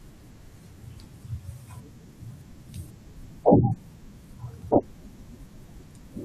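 Speech, with a jump at 5.17 s where the audio lurches forward by roughly 150 ms. These are compressed frames skipped: several whole frames of about 23 ms each never reached the output, so playback jumps ahead.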